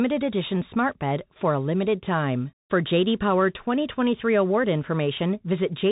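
From start to finish the speech carries Bluetooth CVSD headset codec damage. The one-bit delta coder's adaptive step lags fast, loud high sounds, so s sounds turn scratchy over a granular hiss. A spectrogram shows nothing above 3.8 kHz, a flat ceiling, with grainy noise filling the gaps.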